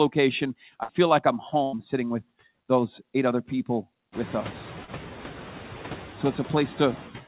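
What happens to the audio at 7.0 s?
Noise suppressor artifacts are present at 7.0 s, as throughout the speech. Frame by frame, the suppressor trims bands it takes for steady noise by only about 2 dB, so the room noise that rose near 4 s stays about 15 dB below the speech, sinking between the words and rising under them.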